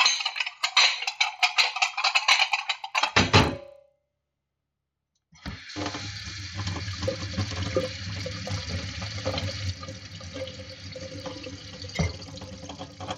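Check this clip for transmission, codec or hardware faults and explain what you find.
There's one fault, and it runs the whole way through. Resampler restarted on every block: each 40 ms chunk got converted from 16 kHz to 48 kHz in isolation, so every edge picks up a small error. That gives a steady 25 Hz tick, almost a buzz, heard only while sound is present.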